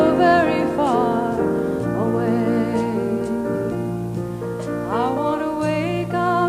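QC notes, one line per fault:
No faults detected in this clip.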